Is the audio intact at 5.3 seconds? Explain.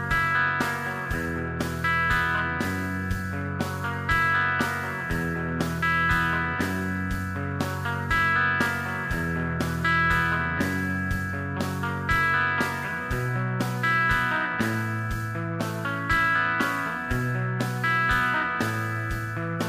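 Yes, at 5.3 seconds the audio runs continuously with no dropout, click, distortion or other fault.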